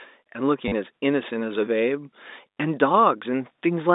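Packet loss with the last packet repeated hits this telephone-band speech recording at 0.68 to 0.72 s (40 ms) and again at 2.50 to 2.57 s (70 ms). In each gap the receiver kept replaying the most recent packet until fresh audio arrived. The run buzzes, giving a brief robotic stutter. The buzz fits 10 ms packets, a 100 Hz repetition. The G.711 line carries roughly 250 Hz to 3.7 kHz.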